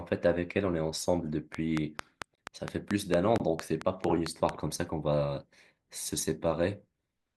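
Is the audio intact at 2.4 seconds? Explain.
No. From 2.35 to 2.38 s there's a gap between stream segments: a hard-edged 25 ms silence where segment timestamps didn't line up, though no audio is lost. A train of clicks also runs from 1.55 to 4.50 s, with regular ticks about 4.5 per second, roughly 20 dB above the speech, likely from interference.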